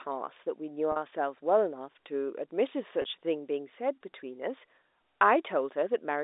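At 0.92 s and again at 3.02 s the speech briefly catches, a packet loss with pitch repetition. The receiver filled each hole by looping the last pitch period. The first gap lasts 40 ms and the second 20 ms, which fits two lost 20 ms packets and then one. Each sounds like a slightly held, buzzy note rather than a click or silent dropout, and speech resumes smoothly over the narrow 300 Hz to 3.7 kHz telephone band.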